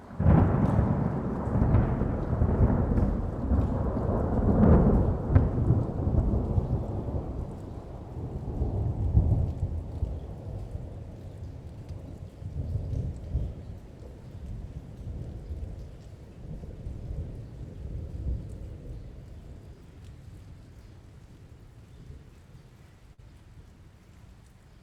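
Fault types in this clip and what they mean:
Burst of packet loss: Near the end, around 23.13 to 23.20 s, a short run of audio never made it through in time. The receiver papered over it by stretching the last bit of sound for about 45 ms and fading it down, so you hear a brief smeared tail. Then playback picks up again roughly 40 ms further along, and whatever happened in that stretch simply isn't there.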